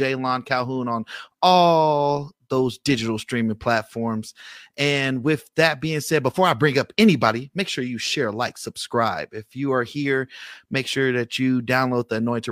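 No technical faults can be heard at any point in the speech recording.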